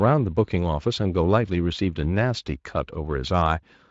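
Nothing technically wrong can be heard in this speech recording. It has passed through the Speex codec at what sounds like a fairly high quality setting, which leaves only light traces of the coding on the sound.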